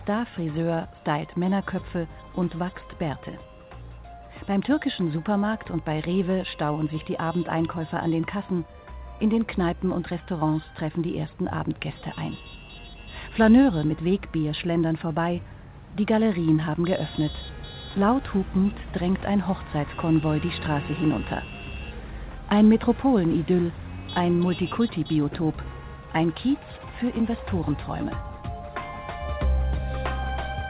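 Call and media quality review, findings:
Nothing to flag here; the call path comes across as expected, with the band topping out around 4 kHz, which fits a G.711 A-law narrowband link at 64 kbps.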